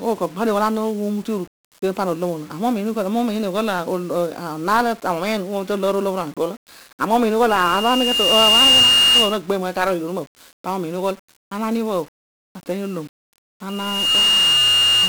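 From the first moment to the last, the speech carries heavy 1-bit DFPWM compression damage. Each sample is reduced to a single up-or-down step of an adaptive level, so a dense broadband fizz and crackle rides on every sound and the treble drowns in hiss. The density of the noise fits a stream of about 48 kbps. Unlike ordinary low-bitrate codec artefacts, there is no swirly, metallic smearing, only grainy noise tied to the signal.

From 7.49 s to 9.39 s a loudspeaker feedback squeal appears. The microphone is picking up its own loudspeaker, and at 2.8 kHz the loop gain passes one, so that tone feeds itself. It swells over roughly a second and a half to about 10 dB above the speech. A second squeal at the same 2.8 kHz starts at 13.69 s and lasts to the end at 15.09 s. This one builds in roughly half a second but peaks lower, around 5 dB above the speech. A plain interfering whistle would not do this. 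Both times the tone grows from nothing at one fixed pitch, which shows a feedback loop.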